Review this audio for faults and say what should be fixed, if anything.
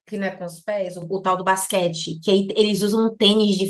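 Microphone volume stepped up at 1.02 s: the input gain on the capture device jumped by about 7 dB in a single step, so the speech and the background noise floor rise together. That points to the call software's automatic level control raising the microphone volume, rather than any change in the talker. Prevent it by fixing the device input level and disabling the application's automatic microphone gain adjustment.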